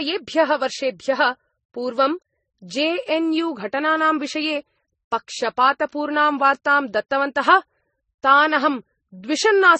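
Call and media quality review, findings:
Transcoding between lossy codecs, throughout: stacked smearing and swirl, nothing above 8.3 kHz; likely repeated low-bitrate MP3 and Vorbis passes, each re-encoding the earlier artefacts.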